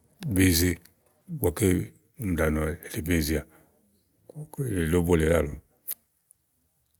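Listening closely to the speech from beginning to end, nothing stood out as a technical fault at any point.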